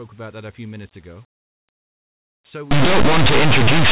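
From 2.71 s to the end, it's linear audio read as companded: 8-bit samples decoded as mu-law, so values just on one side of zero blow up into very loud, harsh distortion.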